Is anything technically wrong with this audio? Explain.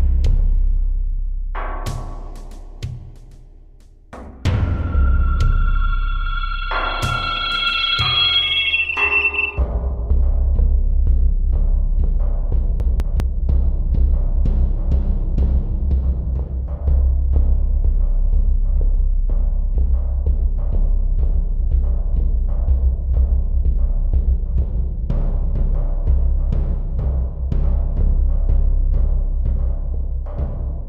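Yes. From 12.8 to 13.2 s the audio briefly jumbles. This is chunks out of order: a 200 ms chunk arrived late and played after the chunk that should follow it, leaving nothing missing but three abrupt joins.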